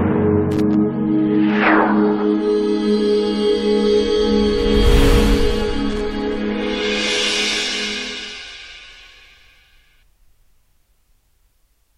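Loose connector crackle appears at 0.51–0.74 s and 5.90–6.01 s, where a worn contact intermittently breaks and remakes the connection, chopping the audio into scratchy, irregular bursts.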